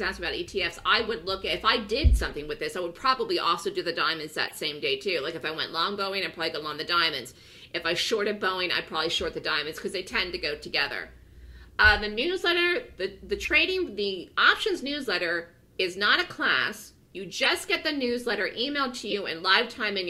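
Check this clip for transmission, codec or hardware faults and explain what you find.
There's one kind of fault here, repeated five times: corrupt frame decoded, at 2.29–2.32 s, 4.48–4.53 s, 13.44–13.48 s, 17.36–17.46 s and 19.10–19.13 s. Damaged bits in one to four frames got decoded anyway, so misread gains throw energy into wrong frequencies, giving short chirps or noise blips. The 17.36 s one runs longest and loudest, near -10 dBFS.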